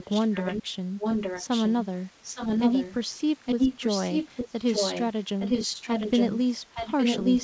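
A delayed second copy of the speech trails it by about 0.86 s in six stretches: 0.00–0.63, 0.99–1.86, 2.23–2.94, 3.45–5.06, 5.39–6.38 and 6.74–7.43 s. It is nearly as loud as the speech, a little quieter in the first and fifth. This is echo leak, likely a loudspeaker on the far end whose echo canceller let its own microphone pickup return. The band stops at 8 kHz, consistent with G.722 wideband coding.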